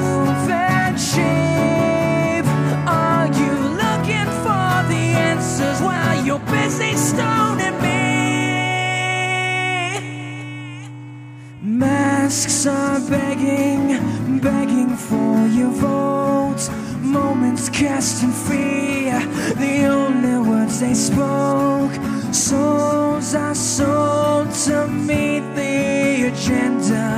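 No technical faults can be heard anywhere here.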